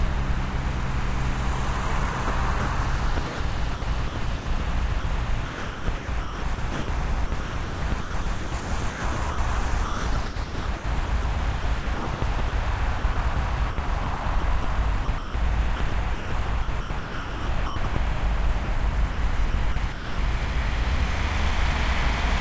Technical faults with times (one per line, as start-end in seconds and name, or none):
2.12-17.96 sound chopped by the voice detector
18.64-20.18 sound chopped by the voice detector